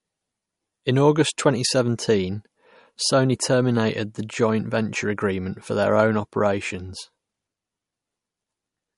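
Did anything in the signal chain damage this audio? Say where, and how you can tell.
Yes. The codec stage. Throughout the speech there is nothing above 11.2 kHz, and a watery, swirling texture is plainly audible. This is likely MP3 compression at a low bitrate, around 48 kbps. Short of bits, the encoder cuts the treble and toggles weak frequency lines.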